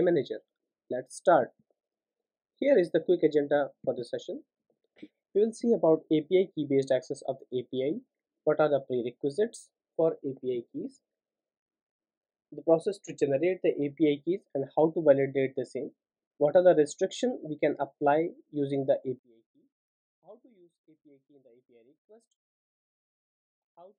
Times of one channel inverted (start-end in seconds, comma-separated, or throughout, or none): 19.19-23.99